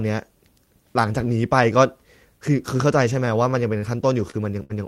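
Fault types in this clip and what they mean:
Short stall from a late packet: speech briefly holds with a slight buzz or dip, four times from 3.25 to 4.30 s, as the jitter buffer ran empty awaiting a late packet.
Burst of packet loss: at 4.63 s a held, fading sound replaces about 60 ms of speech, then the speech resumes further on after packets went missing.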